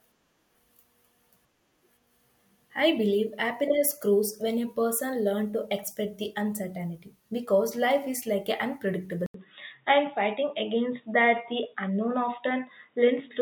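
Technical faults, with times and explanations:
9.26 to 13.42 s, input switched to a poorer device: after a gap of 80 ms, the speech loses everything above 3.8 kHz and turns dull and boxy through to the end, while its loudness stays much the same. A faint new background noise sits far below the speech. The abrupt band-limiting, together with the short silence and changed noise floor, points to a likely mid-recording change of input to a narrower-band microphone or headset call profile.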